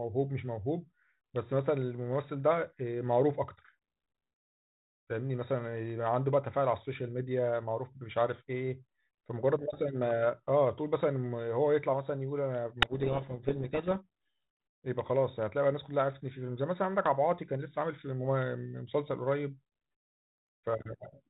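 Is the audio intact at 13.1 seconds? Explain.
No. From 12.80 to 13.89 s the receiver reads the G.726 code words in the wrong bit order, a codec payload misread, so each sample decodes to the wrong step in the prediction. The speech sinks under harsh distortion until both ends agree again.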